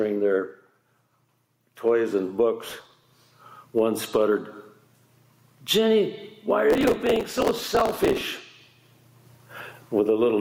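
Throughout the clip the level breathes, a swing of around 10 dB, leaving loud and soft parts squashed close together. This is gain pumping, likely from the input gain being set far too high so that a fast limiter or compressor keeps clamping down on every peak and releasing again in the pauses.

From 2.65 to 3.16 s a burst of gritty crackle tears across the sound, then stops. It returns for longer, from 6.70 to 8.21 s. This is processor overload crackle. The processor fell behind and missed deadline after deadline for a very small audio buffer, which fits a buffer of well under a millisecond. Each missed block was skipped outright, leaving a tiny hard-edged gap. Dozens of these gaps in the first burst, and over a hundred in the second, pile up into the rough tearing heard until the load eased.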